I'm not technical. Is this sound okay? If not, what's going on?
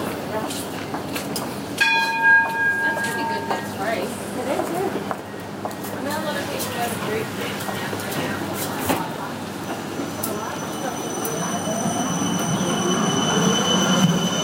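Yes, nothing in this audio indicates a technical fault.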